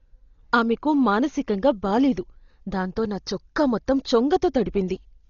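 Dolby Digital compression is the likely cause of the damage heard throughout the speech. Nothing reaches above about 6.9 kHz, which fits an encoder starved at roughly 32 kbps: it narrows the band and leaves many frequency lines to dither noise, giving a dull sound with rough fluttering.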